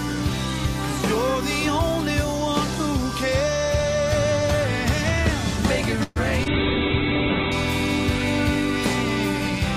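A call audio freeze runs from 6.03 to 6.18 s. The last sound stretches into a fading buzz or hiss for about 123 ms, likely because packets stalled in transit and the jitter buffer drained. The audio then resumes where it stopped, about 123 ms later, with nothing lost. Short concealed packet loss follows at 6.44 to 6.48 s. About 20 ms of audio never arrived in time, and the receiver bridged the hole by extrapolating the preceding sound before blending back, leaving a brief smear or wobble. A call bitrate drop starts at 6.48 s and lasts until 7.60 s. The encoder falls from 48 kbps to 7 kbps, holds its lowest rate for about a second, and narrows the bandwidth from 20 kHz to 4 kHz, so the audio turns coarse, watery or muffled.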